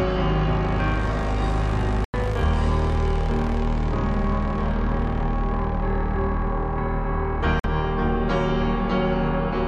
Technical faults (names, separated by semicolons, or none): corrupt frame muted